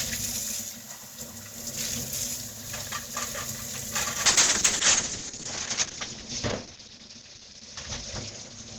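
At 4.26 s a call bitrate drop sets in and lasts to the end. The bandwidth estimate fell, so the encoder went from about 48 kbps down to 7 kbps, holding the lowest rate for 1.39 s. It codes far more coarsely and narrows the audio band from 20 kHz to 8 kHz. The sound turns muffled with a watery, rough texture. Unlike packet loss, it never breaks up or drops out, and unlike a simple low-pass filter, the graininess comes with the dullness.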